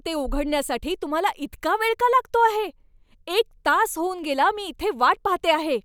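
At 4.81 s, just after "तास होऊन गेला मी", the speech drops for 0.67 ms into a block of digital silence. This is a run of zeros that fits a 32-sample buffer left unfilled. Because the signal cuts straight to zero and back with no fade, the hole is far too short to hear as a gap and comes through as a single sharp tick. That sets it apart from a longer dropout, which would be heard as an actual break in the speech.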